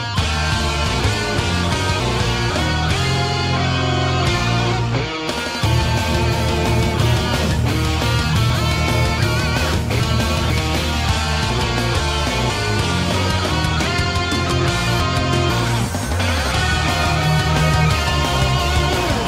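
Chunks out of order at 1.0–2.5 s, 8.5–10.5 s, 11.5–12.5 s and 14.5–15.5 s: a 0.5 s block plays one to three blocks late, giving a jumbled sound. Waveform and spectrogram show three abrupt vertical seams per event, with mismatched content on either side.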